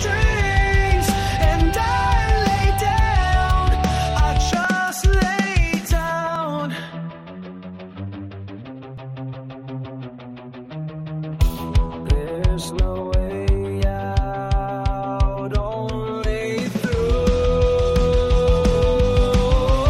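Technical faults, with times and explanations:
4.65 s, 6.36 s and 8.98 s: dropped buffer (overrun). Each is a brief skip where the sound jumps ahead with no silence. About 5 ms is lost at the first and third, about 10 ms at the second. The likely cause is the hardware overwriting samples before they were collected, which joins the surrounding audio directly.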